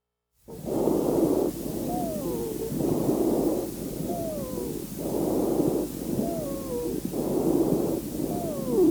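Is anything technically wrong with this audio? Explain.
No, nothing is technically wrong with this audio.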